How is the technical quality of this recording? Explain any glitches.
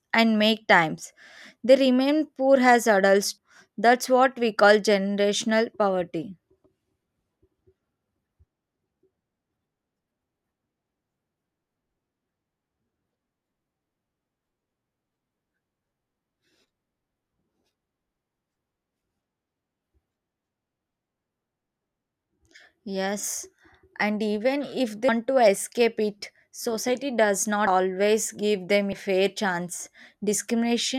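The speech has five dropouts where compressed frames were skipped. Each is a short jump forward in the audio, not a click.

Compressed frames skipped at 3.37 s after "remain poor as adults", 18.76 s, 25.08 s between "and even if" and "to escape it society", 27.67 s after "escape it society does", and 28.92 s. The decoder lost or rejected whole blocks, so playback leaps ahead roughly 70 to 300 ms, in steps that fit frames of about 26 ms. Overlapping neighbour frames blur each join into a brief smeared blip.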